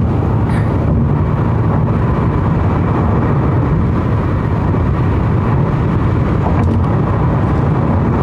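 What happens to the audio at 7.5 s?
At 7.5 s the audio is intact, with no audible fault at that moment.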